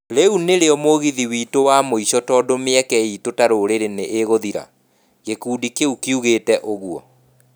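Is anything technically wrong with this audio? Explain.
No, nothing technically wrong turns up here; this bit of speech comes through without any faults worth pointing out.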